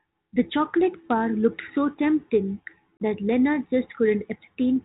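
Speech carried over a G.726 ADPCM link at 32 kbit/s, with nothing heard above 4 kHz, breaks up once through packet loss on an ADPCM call. A 30 ms silent hole runs from 2.97 s to 3.02 s. That is roughly three packets, and on a waveform it shows as a flat gap with sheer edges. Afterward the decoder's predictor and step size are out of step with the sender, so the speech comes back slightly distorted and settles within tens of milliseconds.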